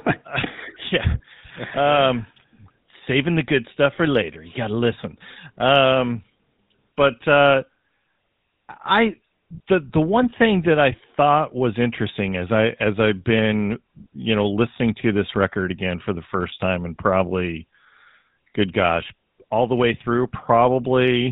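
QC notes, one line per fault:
Throughout, GSM full-rate codec: the speech carries a buzzy, gravelly roughness and stops dead at 4 kHz, consistent with a 13 kbps full-rate coder rebuilding the voice from sparse regular pulses through a vocal-tract filter, unlike plain band-limiting, which dulls without adding this rasp.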